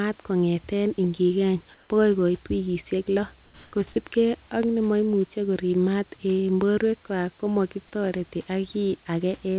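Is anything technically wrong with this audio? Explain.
Yes. The audio has two kinds of fault: the background is twice replaced by synthetic noise, and a brief piece of speech is lost.

Comfort noise in place of the background occurs from 1.74 to 1.90 s, between "kongeten ingigeny" and "bokoi koit wikisiek", and again from 3.44 to 3.72 s. During these pauses the sender likely stopped transmitting and the receiver generated filler noise. For 160 ms and then 280 ms, the room's natural background gives way to a flat, textureless hiss. The first patch is about 1 dB louder than the surrounding background, and the second is about 2 dB quieter.

Sound dropped by the voice detector occurs from 3.92 to 3.96 s. The detector likely mistook part of the sound for background and cut transmission. For 40 ms the speech drops out before the signal returns.

The whole clip has nothing above 4 kHz, which points to a narrowband telephone codec. 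Real room noise sits about 34 dB below the speech.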